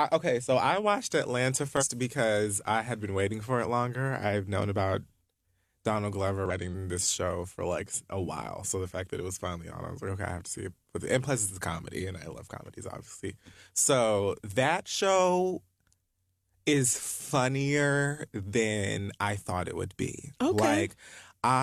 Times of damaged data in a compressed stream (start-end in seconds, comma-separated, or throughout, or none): 1.77-1.84, 6.46-6.51